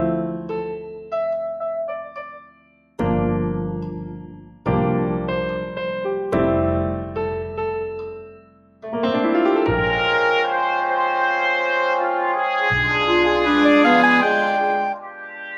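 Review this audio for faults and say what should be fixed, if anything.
The level pumps and thins by around 10 dB throughout. A noise suppressor applied to music or sounds, one designed for speech, is mistaking steady material for noise.

Sustained passages dip sharply at 0.79–1.13 s (about 10 dB), 2.33–2.99 s (about 18 dB), 4.23–4.67 s (about 17 dB), 8.15–8.86 s (about 18 dB) and 14.94 s to the end (about 14 dB). This is sound cut by the noise suppressor.

Bypass or disable speech-oriented noise suppression whenever the source is not speech.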